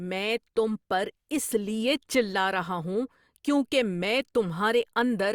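Listening through the speech, nothing stood out as a technical fault at any point.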